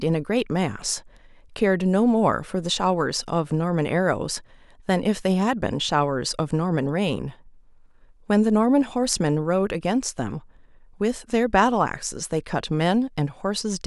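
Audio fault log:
Nothing stood out on listening through the speech recording.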